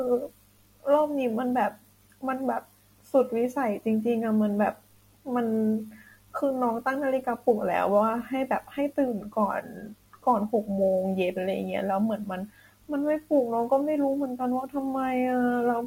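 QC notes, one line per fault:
Throughout, sample clock jitter: timing wobble of a few microseconds adds hiss roughly 40 dB below the speech, strongest on loud sibilants, showing as broadband haze tracking energy.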